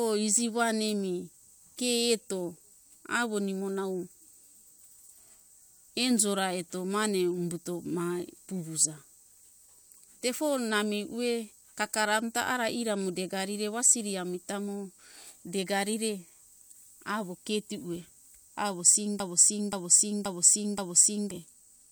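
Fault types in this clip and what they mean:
Broken-record loop: From 19.2 s to 21.31 s, one short piece of the speech, about 0.53 s long, repeats exactly and back to back. It plays four times with no change between passes. The most likely cause is a stall in the player, encoder or stream, which kept sending the last fragment it held. Whatever speech should have filled those two seconds is missing.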